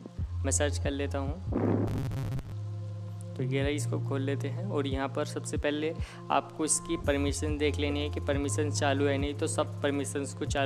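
Robotic sound from repeated short buffers runs from 1.88 to 2.52 s. Across this stretch the audio collapses into a rigid, metallic buzz pitched at 134 Hz that still loosely traces the sound's contours. The likely cause is input arriving too slowly, so the playback fills gaps by looping a fragment of about 7.5 ms, which sets that fixed pitch. Roughly half the material is replaced by these repeats, and the skipped audio is lost.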